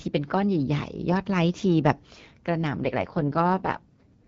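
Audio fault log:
2.78–4.27 s, AMR rate drop: the speech turns rough and synthetic to the end with no gap or band change. This fits the network cutting AMR-WB from 12.65 to 6.6 kbit/s over a weak radio link and spending the freed bits on error protection.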